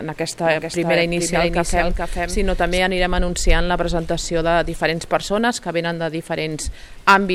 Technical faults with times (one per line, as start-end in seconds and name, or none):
0.46-2.78 doubled audio track